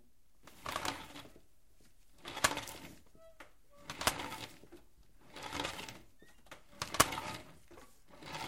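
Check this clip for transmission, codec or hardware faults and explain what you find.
Two brief dropouts from lost LE Audio frames: one 10 ms gap at 2.38 s, and about 40 ms lost between 4.98 and 5.05 s, spread over 80 ms with the longest run about 30 ms. That fits four 10 ms frames. The LC3 decoder refilled the gaps with the previous spectrum at random signs, smearing tones into a brief noisy hiss. A spectrogram shows harmonic lines blurring into broadband patches. The waveform shows short ragged stretches.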